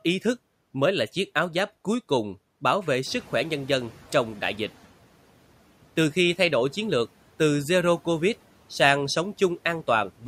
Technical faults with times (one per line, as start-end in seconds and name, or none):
3.06-4.70 noise suppressor catching up